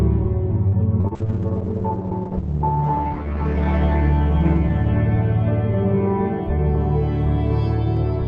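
A short stall from a late packet at 0.67 to 0.76 s: the jitter buffer ran dry, so the music is held about 52 ms, then resumes where it stopped.

Short concealed packet loss at 1.01 to 1.18 s, overlapping a second at 1.08 to 1.14 s: about 40 ms vanished each time, and roughly 30 ms of extrapolated sound papers over each gap, leaving a smeared wobble.

A call bitrate drop runs from 1.18 to 7.17 s, falling from 128 to 9 kbps and staying at its lowest for 2.44 s. The music turns watery and muffled, with the top end cut from 20 kHz to 8 kHz.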